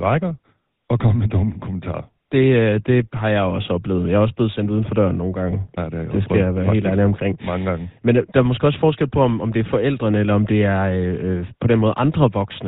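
From start to finish the speech carries GSM full-rate codec damage: nothing above 4 kHz, and a buzzy, gravelly roughness from pulse-driven vocal-tract modelling, consistent with 13 kbps.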